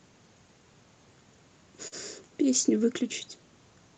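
At 1.87 to 1.95 s there is a short concealed packet loss. About 40 ms of the speech never arrived in time, and the receiver covered the gap with about 44 ms of made-up sound, carrying on from the preceding sound and then blending back into the real signal. It is heard as a brief smear or wobble, not a hard click or a silent hole, which is what separates it from a plain dropout. The call path's codec leaves nothing above 8 kHz.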